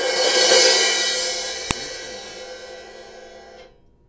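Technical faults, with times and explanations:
1.71 s, file header played as audio: there's a sharp, loud snap right at 1.71 s that has nothing to do with what the sound is doing around it. That's the telltale sign of a second WAV piece being joined on without its header stripped off, so the few dozen header bytes get read out as if they were samples. Those bytes are just numbers about format and length, so they come out as an abrupt spike, lasting barely a millisecond here.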